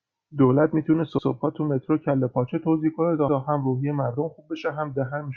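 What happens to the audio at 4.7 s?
Nothing goes wrong at 4.7 s: the speech carries straight through that moment without any dropout, click, distortion or other fault.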